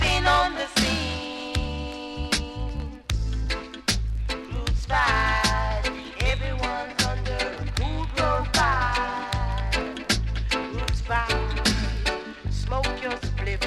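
Nothing is technically wrong with this audio.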